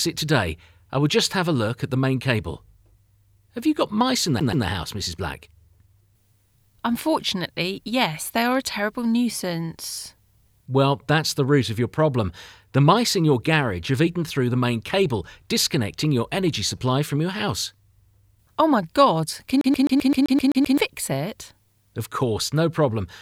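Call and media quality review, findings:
CD stuck on one turn at 4.40–4.66 s and 19.61–20.78 s. The same 0.13 s segment repeats, 2 then 9 times, with a short mute at each jump. This points to a scratch throwing the laser back one track.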